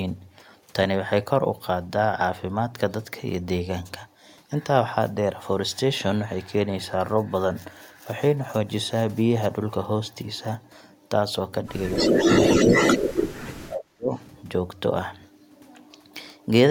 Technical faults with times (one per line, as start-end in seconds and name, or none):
11.90-12.17 speech suppressed in double talk
11.93-13.38 echo leak
12.65-12.72 speech suppressed in double talk
13.36-14.10 speech suppressed in double talk
14.16-14.23 echo leak